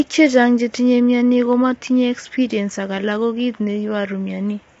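From start to finish the speech sounds rough and grainy, with noise filling the gaps between harmonics and nothing above 7.8 kHz. That's likely low-delay AAC compression: short frames resolve pitch poorly, and the damage fits a bitrate around 24 kbps.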